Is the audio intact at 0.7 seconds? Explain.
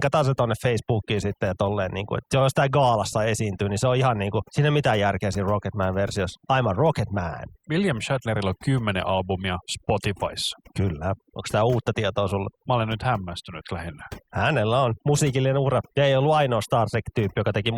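No, at 0.7 seconds you're hearing overdone noise removal, and it runs through the whole clip. The denoiser was pushed so hard that it kills frequency bands sitting near its noise estimate, taking quieter parts of the speech along, so the background drops and breaks up into twinkly specks.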